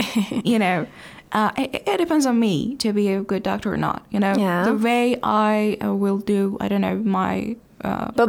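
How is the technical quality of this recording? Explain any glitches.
The technical quality of this recording holds up, with no glitches to explain.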